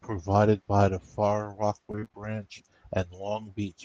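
From 1.91 s to 2.16 s the speech breaks into repeated packet loss, heard as a robotic sound. Six short holes fall in quick succession, the longest 28 ms, and each is patched by stretching the preceding sound, so about half of that quarter-second, around 124 ms, is concealment. Unlike a single dropout, which leaves one clean gap, the rapid chain of patches gives a choppy sound with fragments of the speech missing.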